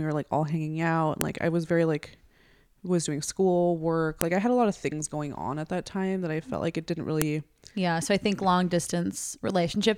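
File header played as audio: sharp, loud clicks at 1.21 s, 4.21 s and 7.22 s, each a brief snap that cuts through the speech regardless of what the talker is doing. The spacing is a steady 3.0 s, which points to the recording having been assembled from 3-second WAV pieces joined or streamed without stripping each piece's header, so those few dozen bytes of file metadata were decoded as sample values at every boundary.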